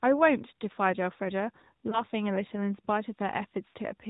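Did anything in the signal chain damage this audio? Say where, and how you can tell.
Yes, at the codec stage, throughout. The AMR narrowband mobile codec leaves nothing above 4 kHz and gives the speech a plainly buzzy, synthetic edge. That's the vocal tract model plus sparse pulse excitation, and the amount of damage fits a mid-rate mode around 10 kbps.

Lost AMR speech frames show up twice on the network side. At 1.90 to 2.03 s there's a brief dip, consistent with a single 20 ms frame. At 3.68 to 3.77 s the sound smears and sags, more like a run of about three frames. The decoder is patching over them by reusing the last good pitch and filter settings at falling gain.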